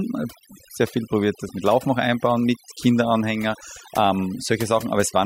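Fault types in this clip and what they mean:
overdone noise removal: noise reduction set too strong throughout, pulling down bands near its noise estimate, leaving a lowered background broken into twinkling specks.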